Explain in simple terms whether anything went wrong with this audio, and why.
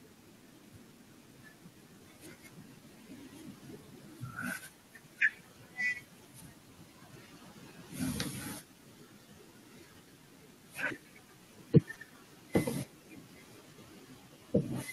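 Nothing went wrong here: listening through, no technical fault turns up anywhere in the recording.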